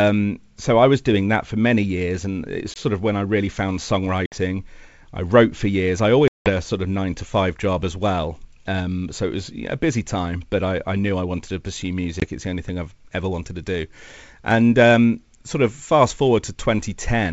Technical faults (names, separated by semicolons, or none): packet loss on an ADPCM call